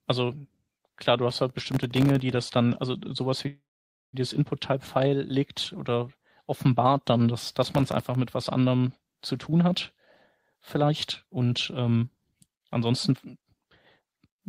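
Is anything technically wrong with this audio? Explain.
Yes. The speech has three kinds of fault.

Processor overload crackle appears from 1.30 to 2.32 s, between "klar du" and "das dann also", and again from 7.43 to 8.15 s, between "legt oder offenbart dann" and "mit was anderem". The processor repeatedly failed to deliver its audio buffers on time, dozens in a row, and each missed buffer came out as silence. The gaps are so short that they fit a buffer of around a millisecond and a half. Together they sound like a gritty, tearing crackle over the speech. The waveform shows many tiny dropouts with sharp edges, and the spectrogram shows thin vertical broadband stripes across the whole band.

A call audio freeze runs from 3.47 to 4.16 s. The speech stalls. A brief continuation of the last sound fades into about 520 ms of silence, and then the speech resumes exactly where it stopped, with nothing lost. 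The likely cause is delayed packets draining the jitter buffer. The stream now runs 657 ms later than before. On a waveform this is a flat gap inserted into the speech, and on a spectrogram it is a short smeared tail followed by an empty column.

A jitter buffer speed-up follows at 9.34 to 9.72 s, right after "mit was anderem", at 119% speed. A second one runs from 10.55 to 14.42 s at 114%. The receiver had built up excess delay and trimmed it by cutting out small pitch-period slices, about 70 ms in the first stretch and around half a second in the second. The pitch stays the same, but the speech sounds hurried. The spectrogram shows compressed syllables with normal harmonic spacing.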